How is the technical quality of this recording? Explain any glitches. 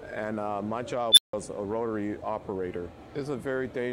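One serious glitch. At 1.12 s an unstable filter blows up: a squeal around 4 kHz swells for about 51 ms, clips, overflows, then cuts to roughly 163 ms of silence until 1.33 s.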